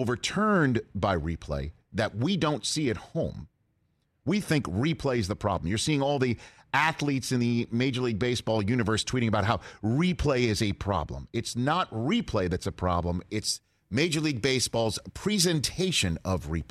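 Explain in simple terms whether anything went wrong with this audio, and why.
From 13.37 s to the end, there's pre-emphasis left on: the treble boost was never undone, so the speech turns thin, bright and hissy on s-sounds.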